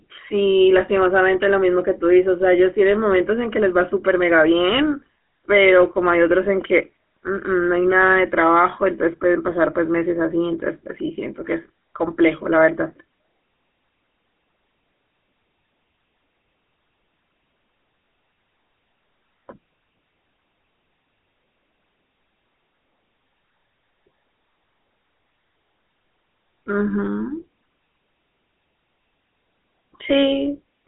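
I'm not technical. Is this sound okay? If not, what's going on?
No. All the way through, the speech sounds buzzy and gravelly, with a muffled, phone-line quality and nothing above about 3.8 kHz. That comes from the GSM full-rate codec, an early mobile-phone coding scheme that rebuilds the voice from a coarse, pulse-driven model.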